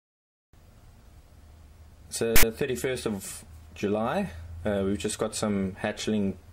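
At 2.36 s there's a short, ugly burst lasting about 70 ms, out to 2.43 s, and it's a case of file tags played as audio. A block of text metadata got handed to the decoder as if it were sample data, so those character bytes turned into a loud, raspy buzz sitting off to one side of centre. It switches on and off with hard edges, so it sounds like a sudden stab of static.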